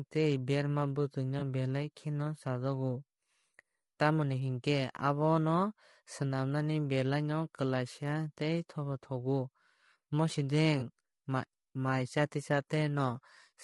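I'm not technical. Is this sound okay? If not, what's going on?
No. The speech sounds rough and grainy throughout, likely from low-delay AAC compression squeezing the voice into very little data, as in video calls.

There are also two very brief smeared, noisy blips, from 1.39 to 1.42 s (just before "belai no chajago") and from 10.79 to 10.83 s. This is AAC frame loss with concealment: a small piece of audio went missing and the decoder patched the gap with a guess.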